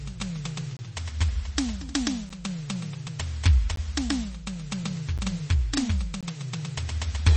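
A music recording with a hard treble ceiling at 8.4 kHz, a watery, swirling texture and metallic chirps on bright transients, the signature of heavy MP3 compression, likely from encoding at a very low bitrate around 32 kbps, where starved frames drop weak spectral lines. Five blocks of digital silence cut the audio out with no fade, at 0.77 to 0.79 s, 2.29 s, 3.76 s, 5.18 s and 6.21 to 6.23 s, each lasting 10 to 23 ms and heard as a click or brief hole, consistent with the output buffer not being filled in time.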